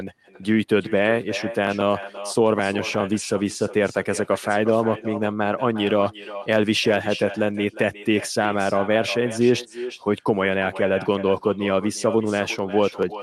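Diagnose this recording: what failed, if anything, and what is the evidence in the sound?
Echo with no canceller, a call-processing failure present from start to finish: every phrase returns as a fainter, thinner copy around 400 ms later, about 14 dB below the direct speech. The far end's microphone picks up its own loudspeaker, and no canceller removes it, so the sound makes the network round trip back. Room reverberation would smear directly onto the speech's tail. Here the copy is a separate, late repeat, over a band that reaches about 12 kHz.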